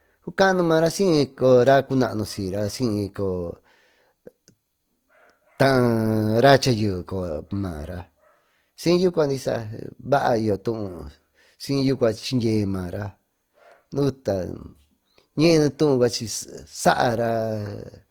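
A speech recording with Opus compression damage running from start to finish. The texture is rough and grainy rather than swirly. Fine detail in the voice turns noisy, as if thin static rides on top. The damage is plainly audible. Bands starved of bits are filled with folded or noise-like content, so few holes open up. The spectrum still reaches up to about 20.3 kHz. The likely cause is an Opus encode at a low bitrate, around 24 kbps.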